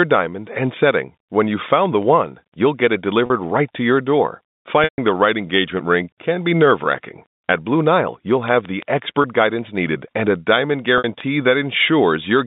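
Packet loss with pitch repetition interrupts the speech four times: at 3.26 s (40 ms), 4.84 s (140 ms), 9.22 s (20 ms) and 10.98 s (60 ms). The receiver fills each gap by looping the last pitch period. Short gaps sound like a held, buzzy tone and show as flat, evenly spaced harmonics on a spectrogram. The 140 ms gap, which points to several consecutive lost packets, fades to a near-silent hole in the waveform before the speech returns over the narrow G.711 telephone band.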